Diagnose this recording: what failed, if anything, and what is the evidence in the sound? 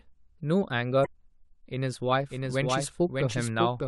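Damaged data in the compressed stream, 1.02 to 1.06 s: a short glitch as the decoder misreads corrupted codec frames, then resyncs.

Doubled audio track, 2.30 s to the end: a dry full-band copy about 0.7 s late and roughly 5 dB quieter starts abruptly, likely a second capture path.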